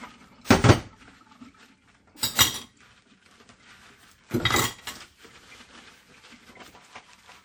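Right from the start there's a washy, ringing quality with a hiss that swells and fades along with the sound, and nothing above about 19.9 kHz. That's likely WMA compression, and the damage is plainly audible, pointing to something around 48 kbps.

At 0.45 s there's pre-echo: a short smear of hiss lasting about 50 ms creeps in just ahead of a sharp attack. The codec has spread the noise meant for the loud hit across the quiet moment before it, so the attack sounds blunted.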